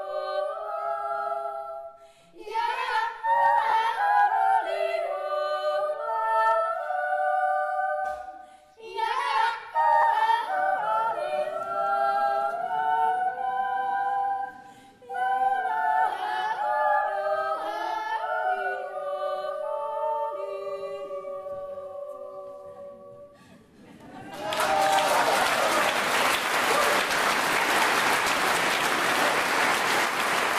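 Audio with lost LE Audio frames: brief gaps at 3.70–3.73 s (30 ms), 10.02 s (10 ms), 24.55–24.57 s (20 ms), 26.42 s and 28.37 s (10 ms each). At each, the LC3 decoder fills the hole by repeating the last spectrum with scrambled phase, so any tonal content turns into a short noisy smear. On a spectrogram, harmonic lines dissolve into a noisy blur for that slice; the waveform shows a ragged, noise-like patch.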